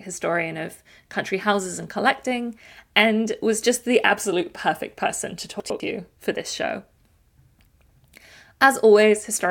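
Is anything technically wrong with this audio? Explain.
Yes. At 5.6 to 5.8 s the speech has a chunks out of order fault. A 100 ms chunk of audio arrived late and played one chunk behind where it belonged. Nothing is missing. The two chunks are simply swapped. That swap creates three hard joins where the waveform does not line up. The result is a brief jumbled, garbled moment in the speech.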